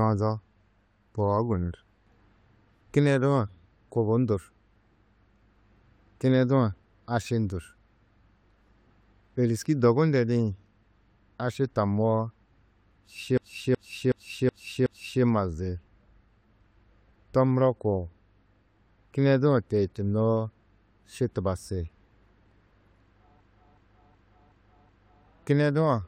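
At 13.38 to 15.23 s and again at 23.41 to 25.26 s, a system hang loop occurs: the system stalled while the audio hardware kept replaying its ring buffer. A 371.52 ms slice of speech repeats five times at 2.69 Hz, a skipping-record repeat that fits a 16384-sample buffer, with essentially nothing skipped afterward.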